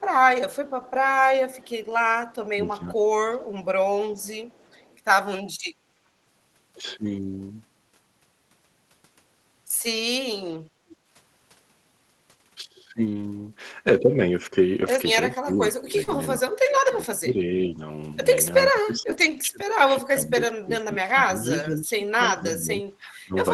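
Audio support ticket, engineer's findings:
Echo leak. Faint delayed repeat of the far-end sound trailing about 410 ms behind. Heard 0.0–2.35 s and 4.19–4.97 s at about 35 dB below the speech, a short burst at 10.91–10.96 s at about 30 dB down, and a burst at 21.60–21.66 s at about 25 dB down. Likely the loudspeaker-side echo canceller leaving residual echo that is sent back down the line.

Speech suppressed in double talk. Talker's speech dips while the other side is also talking. First at 2.56–3.45 s, roughly 700 ms affected, dropping as much as about 20 dB. Again from 15.34 s to the end of the clip, dropping as much as about 25 dB. Likely the echo canceller mistaking overlapping talk for echo and attenuating both.

Lost packet rebuilt from error correction. Brief rough, noisier patches with no audible gap. Heard at 2.67–2.73 s and 7.09–7.15 s (40 ms rebuilt each), 13.05–13.27 s (120 ms), 14.81–14.95 s (80 ms), 16.07–16.13 s (40 ms) and 19.01–19.39 s (200 ms, the longest). 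Component: Opus decoder filling lost packets from the low-bitrate in-band FEC copy carried by the next packet. Band limit near 12 kHz is consistent with Opus around 24 kbps on this call path.

Background gated by the echo canceller. Room tone briefly sinks then returns, 5.78–5.93 s, about 150 ms, deepest drop about 12 dB. Component: echo canceller clamping microphone gain while far-end audio plays, then releasing.

Short concealed packet loss. Brief smear/wobble at 16.03–16.09 s where about 40 ms never arrived in time. Jitter buffer concealment extended the preceding sound and crossfaded back into real audio. Overlaps the FEC-rebuilt patch at 16.07 s, so the two repairs run into each other there.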